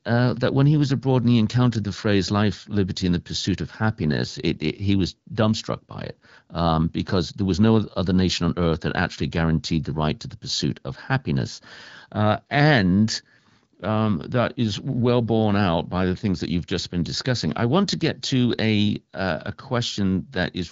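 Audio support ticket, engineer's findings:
Speech passes through the AMR wideband (HD Voice) codec at 12.65 kbit/s with only light coding texture and no content above 7.5 kHz, as expected for that path, and no fault found.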